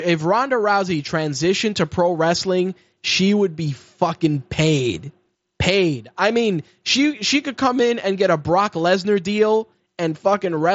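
Nothing goes wrong in this bit of speech, which comes through a Bluetooth headset link on the wideband mSBC codec, so the sound tops out around 7.7 kHz just as that path would have it.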